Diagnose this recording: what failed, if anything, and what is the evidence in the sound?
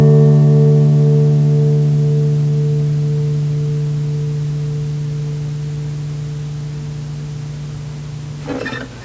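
Nothing failed: the sound carries the ordinary signature of a call's microphone processing, with content reaching up to 8 kHz and nothing above it, and the lowest bass trimmed by that path's high-pass filter as intended.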